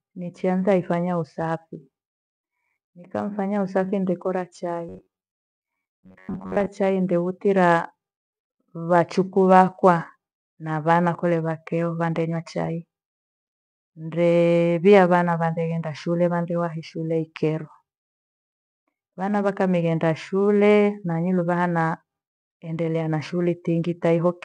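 After "nikamfanya usafi nde kora", from 4.89 to 6.68 s, the speech turns into a rigid metallic buzz at 93.8 Hz. This robotic sound likely comes from repeated short buffers.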